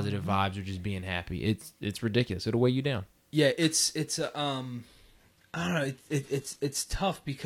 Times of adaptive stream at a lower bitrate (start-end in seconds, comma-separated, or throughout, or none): 4.86-7.45